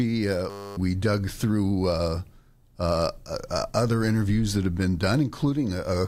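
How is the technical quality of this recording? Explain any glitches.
The recording has one glitch. From 0.5 to 0.77 s, just before "dug through", a steady 100 Hz buzz replaces the speech. This is a system hang loop: the system froze while the audio hardware kept replaying one 10 ms buffer, and roughly a third of a second of speech is lost.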